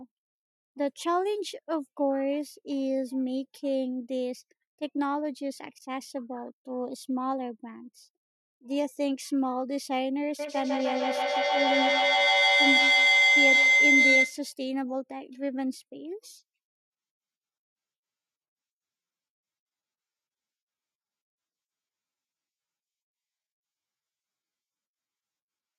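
Feedback howl, 10.39 to 14.43 s: each microphone-to-loudspeaker pass adds gain, building a tone near 2 kHz with repeats roughly every 150 ms, peaking about 7 dB above speech.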